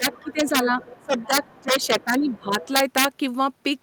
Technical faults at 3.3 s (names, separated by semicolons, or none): integer overflow